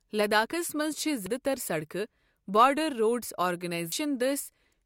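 A brief glitch cuts across the speech at 1.26 s, right after "لداخس منز چھے٘", and a second short blip follows at 3.92 s, just after "بارڈر روڈز". Both come from damaged data in a compressed stream: corrupted bytes at those points left the decoder unable to read the frames correctly, so it lost sync and searched for the next valid frame header.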